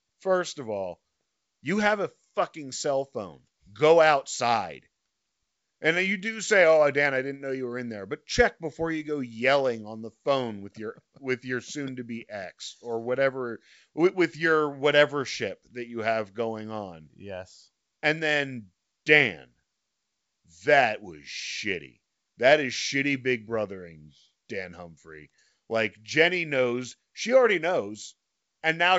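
Nothing's wrong in this speech clip; it just carries the usual wideband telephone sound of G.722 at 64 kbit/s, with the top end tapering off around 7.7 kHz.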